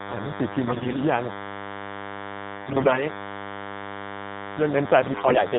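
A speech recording with a DECT cordless phone buzz running through the whole thing: a thin, steady 100 Hz buzz with lots of harmonics, sitting only about 10 dB under the voice. It's a nearby DECT handset or base firing its radio burst every 10 ms, which the audio circuitry rectifies. On top of that, it's been through the AMR narrowband mobile codec, and the damage is plainly audible: nothing above 4 kHz, and a buzzy, synthetic edge to the voice that fits a low-rate mode around 7.4 kbps. Then there are three stretches of AMR bit errors, at 0.66–1.02 s, 2.56–3.04 s and 5.12–5.39 s. Pitch and level roughly hold, but the voice goes hoarse, scratchy and gargly. That's a weak link flipping the lightly protected bits, heaviest in the last burst, so the excitation pulses and fine parameters land wrong.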